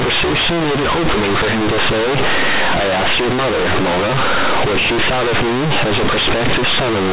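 Companded audio read as linear runs from start to finish of this speech. The sound was encoded as mu-law, the logarithmic 8-bit scale of G.711 telephone coding, but the bytes are being played as plain linear 8-bit samples with no expansion step. Every change of sign throws the output across roughly half its range, so quiet passages come out as loud as peaks. The result is harsh, buzzy, heavily distorted sound, with loud noise filling the pauses.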